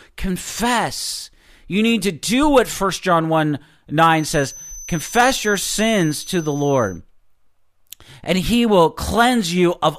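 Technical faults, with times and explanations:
4.10–7.02 s, feedback whistle: a thin, steady 6.1 kHz tone sits well below the speech, swelling and fading slowly in level. A speaker-to-microphone loop is likely held at the edge of feedback.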